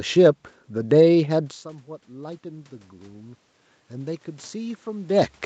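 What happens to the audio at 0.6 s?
Nothing goes wrong at 0.6 s: the speech passes through intact at that moment, with no dropout, glitch or other fault.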